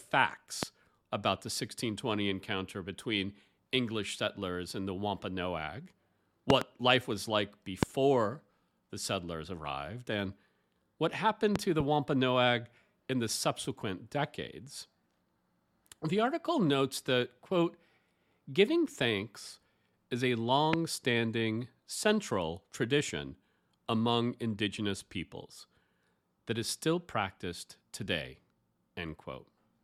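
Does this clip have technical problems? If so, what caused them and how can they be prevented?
Yes, loud pops over the speech at 0.63–0.65, 6.50–6.64 (a double), 7.83–7.85, 11.56–11.83 (another double) and 20.73–20.76 s, roughly 20 dB above the signal (about 25 dB for the one at 6.50 s). A sudden voltage spike, likely from a plug, switch or static discharge, lands on top while the speech carries on underneath. Lock down cables and avoid touching switches or connectors while recording.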